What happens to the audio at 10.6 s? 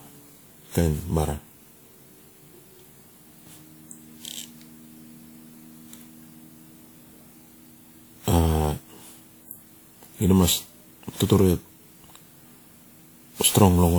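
At 10.6 s the speech carries the generation loss present throughout the clip: swirly, hollow, smeared, with blurred attacks, beyond what 96 kbit/s WMA alone would give. The likely cause is about seven re-encodes, each requantising on a shifted frame grid.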